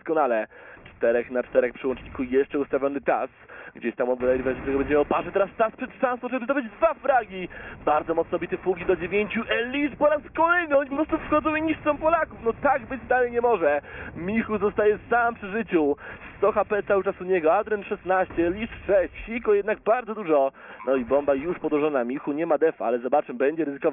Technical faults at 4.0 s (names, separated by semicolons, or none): none